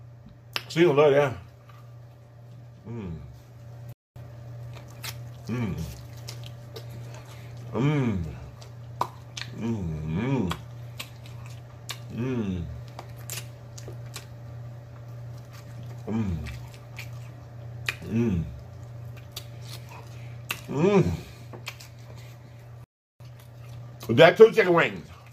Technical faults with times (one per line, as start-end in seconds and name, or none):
3.93-4.16 playback stall
4.16-5.70 time-compressed catch-up
22.84-23.20 playback stall
23.20-25.24 time-compressed catch-up